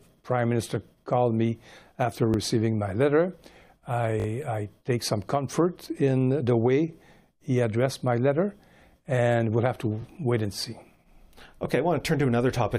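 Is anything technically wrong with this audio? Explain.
Yes. The speech has repeated buffer faults at 2.34–2.36 s, 4.20–4.26 s and 10.02–10.04 s. When fresh audio arrived late, the playback device replayed its last block, a length that fits a 20 ms buffer. This happens once at 2.34 s and 10.02 s and three times at 4.20 s, with essentially nothing lost. Each is heard as a brief stutter or buzz. On the waveform, identical 20 ms segments sit side by side with hard joins. The spectrogram shows vertical seams and a frozen, copied slice.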